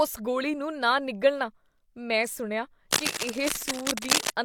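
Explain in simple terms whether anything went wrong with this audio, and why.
Something did go wrong. Right after "ਮੈਂ ਸੁਣਿਆ", from 2.91 to 4.32 s, a rough scratching and rustling noise runs over the speech, about as loud as the voice itself. This is cable scratch noise. A worn cable or plug was likely being moved, making the connection flicker.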